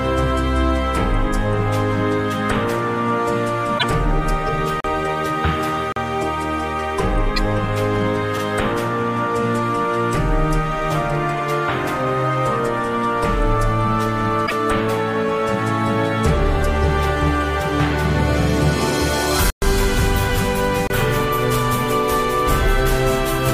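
At 3.75 to 3.85 s, 7.36 s and 14.43 to 14.52 s, damaged data in the compressed stream makes the decoder lose frame sync. Each is a brief squawk or blip, a broadband smear on the spectrogram.

Blocks of digital silence at 4.80 s and 5.92 s (40 ms each), 19.50 s (120 ms) and 20.87 s (about 28 ms) drop the output to silence with no fade. Each leaves a flat-line hole on the waveform.

At 8.38 s and 18.42 s, overlapping chunks, 10 s apart, replay about 48 ms at each join. The result is a stutter, with a repeated waveform segment and a discontinuity.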